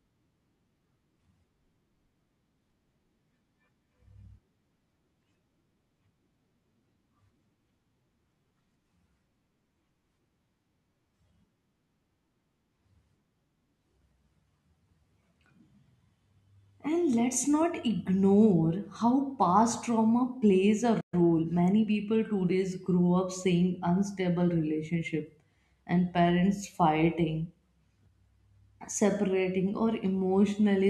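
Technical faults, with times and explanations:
21.00 to 21.14 s, playback stall: right after "past trauma plays a", the speech cuts out mid-flow and the output falls silent for about 120 ms before resuming at the point where it stopped. The break is an abrupt dropout, not a fade or a natural pause, so it lands in the middle of the phrase. The likely cause is the player running short of buffered data, or its output thread being blocked, so nothing was delivered until it recovered.
21.14 to 21.94 s, time-compressed catch-up: once sound returns, the next stretch up to "today grow up seeing" plays hurried, at about 1.15 times normal speed, while the pitch stays unchanged. To drain the backlog built up during the silence, the player removes short slices of audio and cross-fades across each join. Those repeated splices shorten the passage until the tempo returns to normal.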